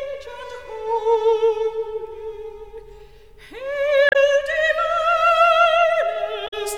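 Damaged data in a compressed stream causes brief glitches at 4.09 to 4.16 s and 6.44 to 6.54 s: corrupted bytes make the decoder misread frames and lose sync, producing a short squawk or blip before it finds the next frame header and the audio resumes.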